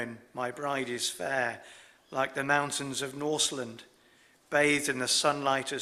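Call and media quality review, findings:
No faults found on review. Nothing in the audio calls for a ticket entry.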